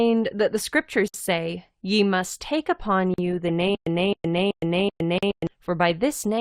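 Right after "that the" at 1.08 s there's a 58 ms hole in the speech, and another of about 43 ms after "must take upon" at 3.14 s. These are gaps at joins of encoded pieces: separately encoded chunks spliced untrimmed, so each seam keeps the encoder's start delay and end padding. They recur every 2 s with softened edges. From 3.75 s to 5.47 s comes a stutter with silent gaps. A 264 ms fragment replays four times, each followed by about 115 ms of dead silence on a 379 ms cycle, while the audio meant for that stretch goes missing. It's likely a stalled player retrying. A third 43 ms join gap at 5.18 s lands inside it.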